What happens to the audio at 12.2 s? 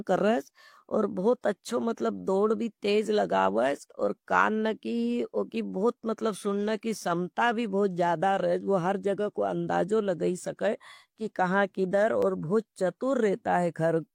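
At 12.22 s an overlap between stream segments removes about 40 ms of speech, up to 12.26 s. Two segments claim the same stretch of time, and the player trims it. The waveform jumps, giving a tiny skip with no silent gap like a dropout.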